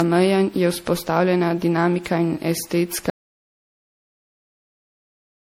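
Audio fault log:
Throughout: generation loss. The speech has a swirly, watery texture, with hollow gaps in the spectrum and consonant onsets smeared instead of crisp. The degradation is heavier than a single pass at the apparent bitrate would produce. This most likely comes from repeated lossy coding, consistent with MP3 at around 64 kbit/s applied about seven times. Each re-encode quantises on a shifted frame grid, so the noise and missing bands compound with every generation.
3.1 s to end: audio dropout to silence. At 3.1 s the speech cuts off mid-flow and never returns. The remaining time is silence, with no room tone underneath. That silent gap points to the input being lost, likely through a disconnected source, a failed link or an unintended mute, while the recorder kept writing empty samples. Anything spoken after the cut is absent from the file.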